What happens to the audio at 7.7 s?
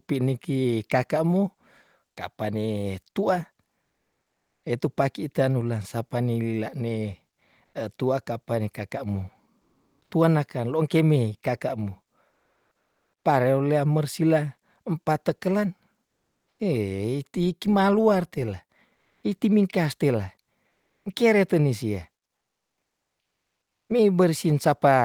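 From 7.65 to 7.73 s, about 80 ms, the faint real background gives way to comfort noise: a steady, featureless hiss at nearly the same level, within about 1 dB. Unlike a dropout, the gap holds noise, not silence. It likely comes from discontinuous transmission, which fits Opus DTX.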